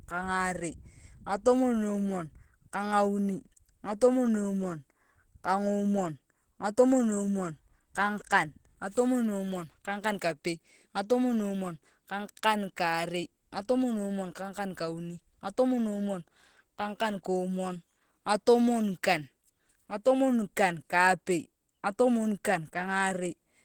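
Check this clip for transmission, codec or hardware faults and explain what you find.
One codec fault affects the whole clip. Throughout, the speech sounds hoarse and muffled, likely from Opus compression in hybrid mode at 16 kbps filling bands with noise. A spectrogram shows noisy, smeared bands reaching 20.1 kHz.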